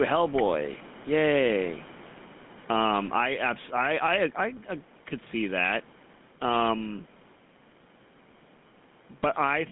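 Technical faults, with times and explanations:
Throughout, gain pumping: the level swings by around 10 dB, so loud and quiet passages sit unnaturally close in level and the speech sounds squashed. The likely cause is input gain set far too high, with a fast limiter or compressor clamping down on each peak. A waveform shows flattened peaks, with a noise floor normally about 30 dB under the speech.
Throughout, GSM full-rate codec: the speech has the buzzy, gravelly roughness of this early codec, plainly audible, which fits the 13 kbps GSM full-rate codec. It rebuilds the voice from a vocal-tract model excited by evenly spaced pulses, keeping only a third of the excitation detail, which causes the grit. The band is limited to about 150 Hz to 3.5 kHz. On a spectrogram the energy stops abruptly, with nothing above 3.8 kHz, and the harmonics look smeared and coarse.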